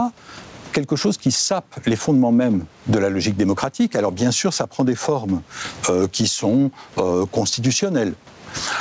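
A speech clip with gain pumping throughout: the background swells in pauses and drops by something like 25 dB under loud bits, likely from far too much mic gain hitting a fast limiter.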